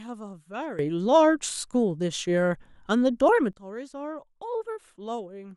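From 0.79 s to 3.53 s the speech and background noise leap up together by about 15 dB, a sudden gain jump, likely from gain applied without any ramp.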